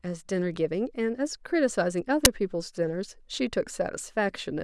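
A sudden, loud crack cuts through the speech at 2.25 s, lasting only about 10 ms. This is an uninitialised buffer: a block was played out before any audio had been written into it, so leftover memory contents came out as samples. The length fits a 256-sample buffer.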